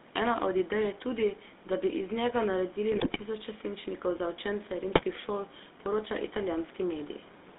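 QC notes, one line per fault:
throughout: GSM full-rate codec. The speech has a steady buzzy, gravelly roughness and a narrow band from about 200 Hz to 3.7 kHz, with nothing above. The sound points to the 13 kbps full-rate coder. It rebuilds the voice from a vocal-tract filter excited by sparse, regularly spaced pulses, so fine waveform detail is lost and the excitation rasps. The damage is plainly audible, and the room noise about 19 dB below the speech passes through the same band.
2.92–3.23 s and 4.88–5.03 s: GSM bit errors. Corrupted bits reach the decoder, so filter, pitch and gain values decode wrongly and the spectrum bends or the level jumps frame by frame. That produces squawks, pops and gargling. The first burst is longer and harsher, which fits roughly fifteen damaged 20 ms frames. The second is brief, falling between "za učence" and "šol poroča", which fits a few damaged frames.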